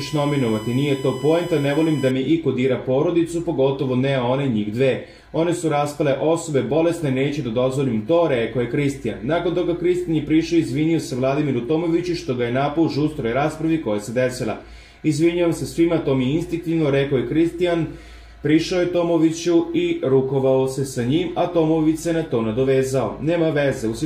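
From 0.0 to 2.11 s a USB whine sits under the sound. It is a fixed tone built on 1 kHz, strongest at 3 kHz. It sits roughly 20 dB below the signal. Current pulses from the bus's 1 ms frames leak in through power or ground.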